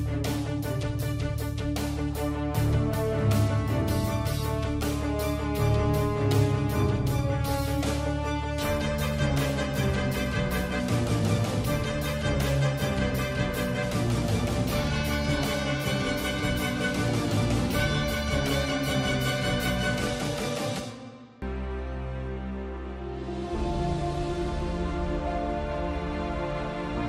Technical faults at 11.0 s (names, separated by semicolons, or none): none